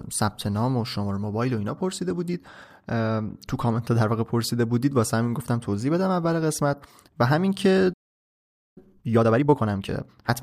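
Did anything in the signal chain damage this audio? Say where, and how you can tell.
Yes, at the playback stage: the speech cuts to clean silence from 7.93 to 8.78 s, about 0.83 s. This playback stall is likely a starved or blocked player, not a codec dropout, which would leave garbled concealment noise.

Then from 8.78 to 10.32 s the speech runs at 1.5 times normal speed, with unchanged pitch. This is time-compressed catch-up: small pieces are cut out and cross-faded. A simple speed-up by resampling would raise the pitch.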